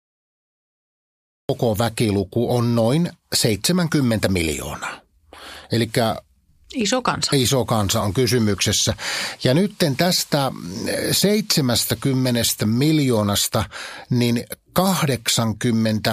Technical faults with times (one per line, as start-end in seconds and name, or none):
0.00-1.49 cut-off start